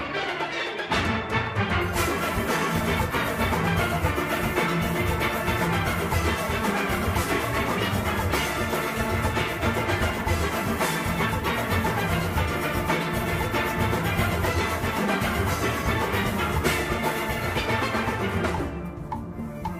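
No technical faults can be heard anywhere in it.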